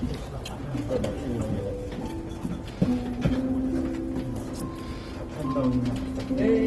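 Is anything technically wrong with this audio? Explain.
Yes. The whole clip carries Opus compression damage, and it is plainly audible. Nothing is present above about 12.2 kHz, so the top octave is gone. Tones sound noisy, rough and grainy rather than clean. This is likely the codec's music mode running short of bits. It keeps each band's energy but fills starved bands with folded or noise-like content, which roughens the texture. The sound points to a low rate, which fits about 16 kbps.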